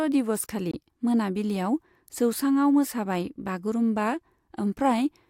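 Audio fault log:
0.71–0.74 s, Bluetooth dropout: the speech cuts to silence for roughly 20 ms, then resumes further along, as though it had kept playing through the gap, so a short slice of material is simply missing. A gap this brief fits a single lost packet that likely never reached the headphones in time. Unlike a buffer underrun, which pauses and then carries on from where it stopped, nothing is delayed here; the audio is just skipped.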